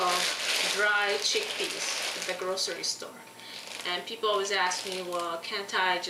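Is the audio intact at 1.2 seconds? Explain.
Yes, the audio at 1.2 seconds is intact, with no dropout, click, distortion or other fault audible at that point.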